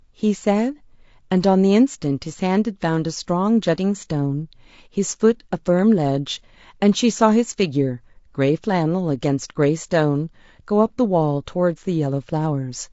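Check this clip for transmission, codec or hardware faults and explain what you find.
One codec fault runs through the whole speech clip.

Throughout, the speech sounds rough and grainy, pointing to likely low-delay AAC compression, consistent with AAC-ELD at around 32 kbps. Its short frames resolve pitch harmonics poorly, and at that bitrate bits run short, so noise fills the gaps between harmonics and the top band is thinned or rebuilt. On a spectrogram, the harmonic stripes look smeared, with a grey noise haze between them and a flat, textureless upper band.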